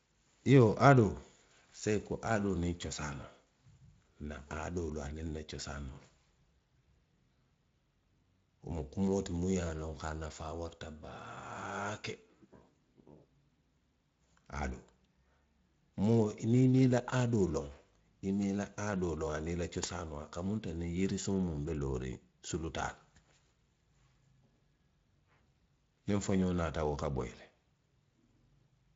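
No technical faults are audible.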